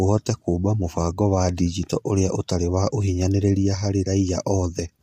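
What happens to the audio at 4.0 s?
At 4.0 s, as throughout the clip, the speech carries the marks of low-delay AAC compression, likely AAC-ELD at a rate that fits about 32 kbps. Its short frames resolve pitch harmonics poorly, so the voice sounds plainly rough and grainy, with noise between harmonics.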